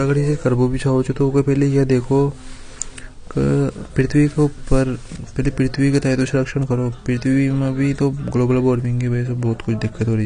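From start to finish the speech is dull and smeared, with nothing above about 9.8 kHz and a plainly audible warbling, fizzy texture on sibilants and held sounds. This is likely AAC compression, AAC-LC at a low rate that fits roughly 32 kbps. The encoder lowered its cut-off and starved some bands of bits, leaving gaps or noise. A simple low-pass filter would dull the top cleanly, without this swirling, unstable grain.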